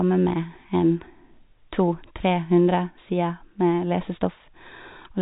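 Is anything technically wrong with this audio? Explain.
No, nothing's wrong here; it's simply speech carried over ordinary G.711 telephone coding, which is why nothing above about 3.8 kHz comes through, exactly as that format should behave.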